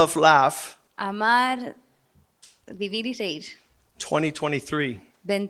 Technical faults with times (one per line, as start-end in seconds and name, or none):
none